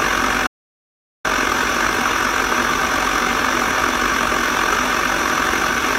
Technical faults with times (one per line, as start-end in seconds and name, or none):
0.47-1.24 audio dropout to silence